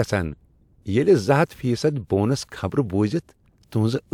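No technical faults are audible.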